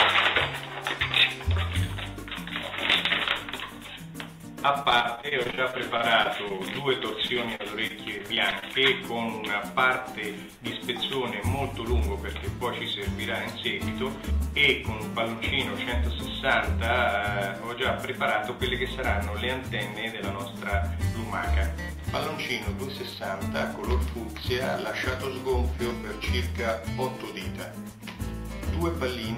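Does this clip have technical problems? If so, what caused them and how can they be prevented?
Yes. Repeated packet loss (robotic sound) occurs from 4.83 to 6.77 s and again from 7.27 to 8.64 s, with audio packets repeatedly lost or arriving late. Each short hole, the longest about 38 ms, is patched by extending the preceding sound, concealing roughly 16% and 11% of the two stretches. The quick succession of patches makes the sound choppy, with fragments missing. A steadier network path and a deeper jitter buffer would prevent this.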